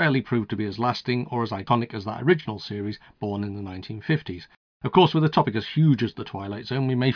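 No dropouts, clicks, distortion or level jumps turn up anywhere in the speech; no faults to report.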